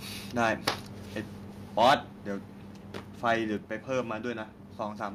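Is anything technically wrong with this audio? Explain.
Yes. Two related faults affect this speech.

Microphone overload at 0.40–0.69 s, 1.79–1.95 s and 3.28–3.32 s: peaks sit about 13, 9 and 3 dB past the converter's limit, likely from excessive input gain, so flattened tops add harsh crackle.

Microphone volume stepped down at 1.88 s and 3.57 s: level drops abruptly by about 2 dB, then 3 dB, likely call software cutting device gain after clipping.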